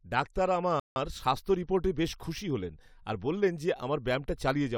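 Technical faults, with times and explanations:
0.80–0.96 s, rebuffering stall: the speech cuts abruptly to silence for about 164 ms, then picks up at exactly the point where it broke off, with nothing skipped or repeated. The player's buffer of downloaded audio ran dry, so playback halted until more data arrived. Because the stream waits rather than jumping ahead, no speech is lost, but the gap adds about 0.16 s to the running time and leaves an unnatural pause.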